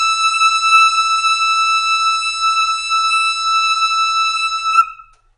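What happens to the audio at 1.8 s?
At 1.8 s the music carries audible MP3 compression damage that runs through the whole clip. The encoder, likely starved at around 40 kbps, cuts all treble above 10.6 kHz and drops weak frequency lines frame by frame, giving a watery, swirly sound. A spectrogram shows a flat ceiling at 10.6 kHz with flickering gaps below it.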